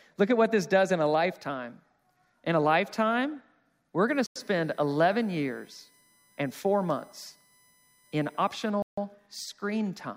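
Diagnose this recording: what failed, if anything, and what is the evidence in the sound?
USB whine, analogue power or ground wiring: from 4.08 to 8.7 s, a fixed 1 kHz tone peaks at 2 kHz, about 35 dB down. Spectrogram shows flat lines from 1 ms bus frames.

Bluetooth stall, likely from a drained wireless buffer: sound cuts to silence for 95 ms at 4.26 s and 151 ms at 8.82 s, showing as flat gaps in the waveform.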